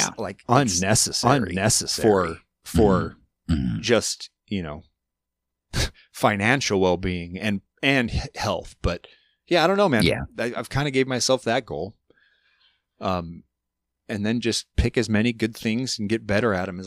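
Doubled audio track runs from the opening of this speech recording to 3.86 s, already under way when it begins. A second full-band copy trails the original by roughly 0.7 s at about equal level, with no decay or room colour, and cuts off abruptly. A slower capture path or an edit holding two offset copies is the likely cause.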